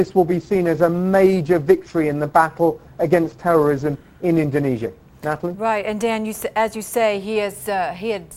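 At 3.69 s there is a bit error spike: a single sample jumps to about -21 dBFS and snaps straight back, as if one bit in the digital word flipped in storage or in transit. It sounds like one bright, sharp tick spread across the whole spectrum, with no relation to the surrounding sound. Unlike an edit click or a dropout, the waveform does not step to a new level or go silent; the audio continues unbroken on both sides.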